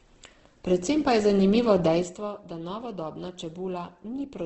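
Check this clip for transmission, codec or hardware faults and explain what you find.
One codec fault runs through the whole recording. Opus compression, from start to finish: the speech has nothing above 8.1 kHz, and the remaining bands sound rough, grainy and noisy rather than hollow or swirling. That texture likely comes from Opus in its music (CELT) mode at a very low rate, around 12 kbps. With too few bits, the encoder keeps each band's energy but fills the detail with folded copies of lower bands or with noise, so the damage is heavy.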